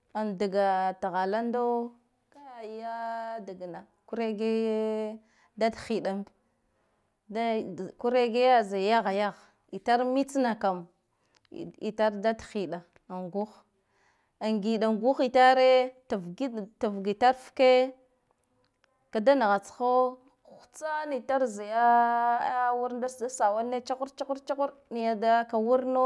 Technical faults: none

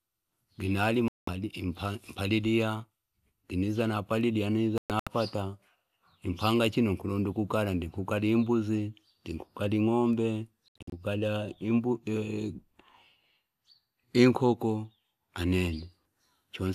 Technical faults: digital broadcast dropout

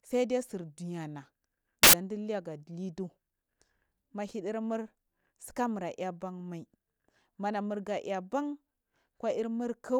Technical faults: samples built from the wrong bytes

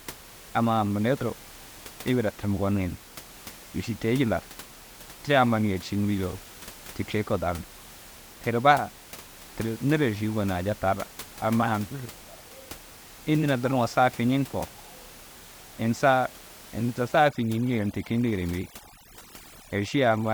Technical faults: overdone noise removal

